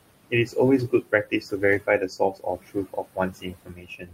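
Throughout the recording, noise suppressor artifacts come from a suppressor that pulls the bands it judges to be steady noise down by about 21 dB, recalculating its decision on every frame. The room noise, sitting about 15 dB below the speech, is therefore carved away in the gaps and allowed back under the words, so the background pumps with the speech.

The same suppressor also removes parts of the speech, producing speech cut by the noise suppressor. From 0.24 to 0.56 s it mistakes speech for noise and drops it by up to about 22 dB, though only around a tenth of a second is actually affected. From 0.88 to 1.62 s the cut reaches about 18 dB across roughly 0.4 s. From 1.79 s to the end it drops speech by up to about 21 dB. In each span, soft sounds and word edges come out swallowed and faint.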